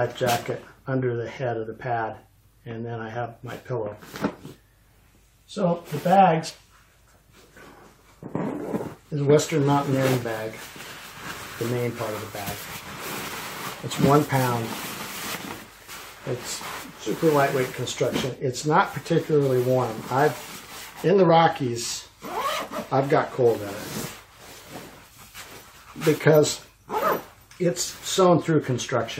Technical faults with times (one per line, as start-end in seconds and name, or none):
6.49 compressed frames skipped
13.28-13.31 corrupt frame decoded
14.99 compressed frames skipped
21.28 compressed frames skipped